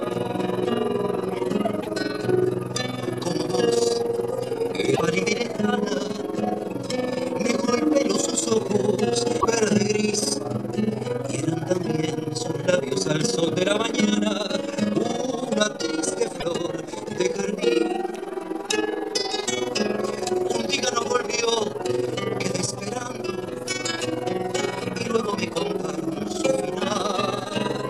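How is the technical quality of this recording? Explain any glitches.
The recording has two technical faults: a continuous level flutter across the whole clip, and four brief glitches.

Overlap-add ripple runs from start to finish. The level swells and dips by about 11 dB, around 20 times a second, giving a rough, robotic tremolo. This happens when audio is split into windowed frames and rejoined with an overlap whose windows don't add up to a steady gain. Each frame boundary leaves a small dip or bump, so the flutter rate matches the frame rate.

Short glitches occur at 1.82–1.87 s, 4.95–5.01 s, 9.39–9.45 s and 16.39–16.44 s. Each lasts roughly 45–60 ms, with the sound skipping ahead and a brief chirp, noise burst or gap in its place. The likely cause is a broken MP3 bit reservoir: frames were dropped, and the following frame, about 26.1 ms long, reached back for borrowed data and decoded bytes from the wrong frame, corrupting a frame or two after each cut.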